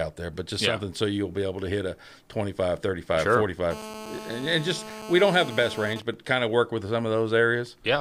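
GSM phone buzz runs from 3.71 to 5.94 s: a nearby 2G handset in a call transmits 217 bursts per second, which the audio circuitry rectifies into a harsh, harmonic-rich buzz about 14 dB below the speech. GSM signalling bursts follow from 5.96 to 7.34 s, as a phone's user is silent in a call and it sends only sparse burst groups, heard as even ticks with a longer 217 Hz buzz twice a second, roughly 20 dB down.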